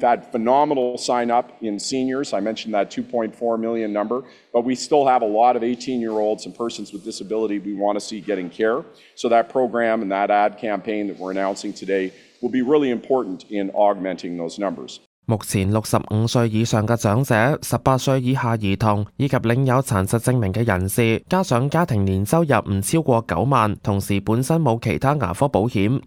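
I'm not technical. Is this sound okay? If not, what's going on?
No. Two connected devices are likely running on separate, mismatched clocks, causing clock slip clicks: a soft, rapid rattle of tiny ticks, about 25 per second, from 0.1 s to 26.05 s.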